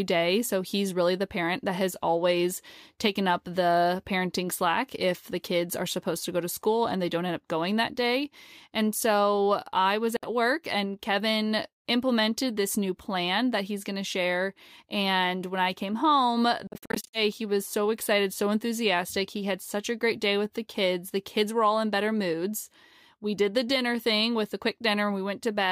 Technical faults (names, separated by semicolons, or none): Bluetooth dropout